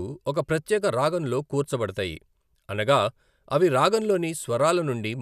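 Nothing stood out as a technical fault when listening to this speech recording.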